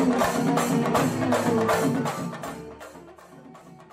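Zipper noise shows up from 1.81 s to 3.20 s: as the level drops by something like 25 dB, it comes down in 2 dB jumps instead of a clean glide, at around ten steps a second, and each jump leaves a tiny click. Those clicks string together into a ticking, zippy texture riding on the sound.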